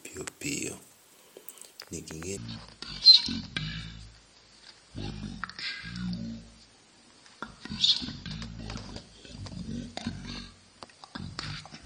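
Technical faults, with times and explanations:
2.37–11.86 s: section at the wrong speed. Speech plays at 0.58x, dropping about ten semitones, deep and slow, likely from playback against the wrong clock.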